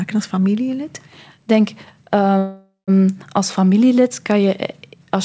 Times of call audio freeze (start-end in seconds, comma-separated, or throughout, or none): 2.38-2.90